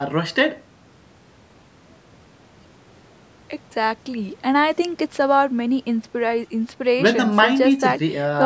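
No technical faults are audible in this speech.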